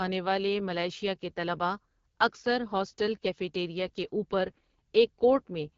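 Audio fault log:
Throughout, AMR wideband (HD Voice) codec: the speech sounds rough and raspy, which fits about 8.85 kbit/s, and nothing sits above roughly 7 kHz. Unlike a plain low-pass, the top band is synthetic hiss. Pulse-driven modelling below 6.4 kHz leaves the speech rough.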